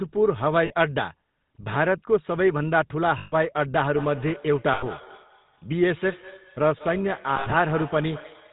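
Speech squeezed through the GSM full-rate codec the whole way, with the buzzy, gravelly grain you get when the vocal tract is modelled and driven by sparse regular pulses, and nothing above 4 kHz survives, which fits the old 13 kbps full-rate setting. Lost GSM frames show up as brief rough metallic holds where the last good frame is repeated: 0.66 s for 40 ms, 3.18 to 3.35 s for 140 ms, 4.74 to 4.84 s for 80 ms, and 7.36 to 7.53 s, where 100 ms of loss is scattered over 160 ms with the longest run around 70 ms. From 3.85 s to the end there's feedback echo between two devices, with speech coming back roughly every fifth of a second, thinner and ringier each pass, at most about 17 dB under the speech. A second device in the room is replaying the call into a microphone whose echo canceller can't see that playback.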